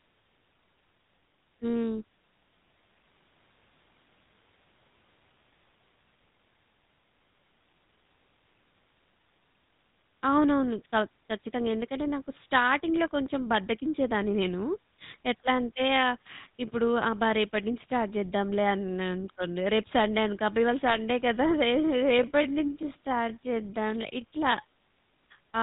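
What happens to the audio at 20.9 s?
From 20.87 to 20.97 s, GSM bit errors break the sound into a short gargling squawk with pops. Corrupted filter, pitch and gain values reach the decoder, so the spectrum warps and the level jumps for roughly five 20 ms frames. Unlike packet loss, nothing goes silent or repeats; the sound turns garbled.

Underneath, the GSM full-rate codec at 13 kbps gives a plainly audible buzzy, gravelly roughness with nothing above 4 kHz. That damage is steady across the whole clip, which separates it from the brief burst of bit errors.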